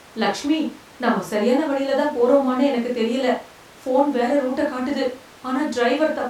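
No technical faults are audible anywhere in this speech recording.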